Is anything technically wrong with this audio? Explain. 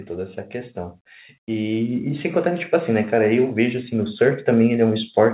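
Yes. From 1.46 to 4.2 s there is automatic gain rising: the gain control judged the input too quiet and raised its gain by about 8 dB over nearly three seconds. The speech and the background noise swell together, which sets it apart from a talker moving closer or raising their voice, where the room noise would stay level. The slow, steady climb also distinguishes it from a sudden level jump. The band stops at 4 kHz, consistent with the narrowband call codec this appears to have passed through.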